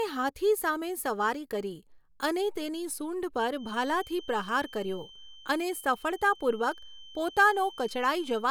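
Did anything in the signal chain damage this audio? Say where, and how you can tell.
Yes. From 3.52 s to the end of the clip at 8.51 s, a steady feedback whistle near 3.1 kHz sits around 20 dB below the speech, thin and slowly swelling and fading in level. This is likely an acoustic loudspeaker-to-microphone loop held just at the threshold of oscillation.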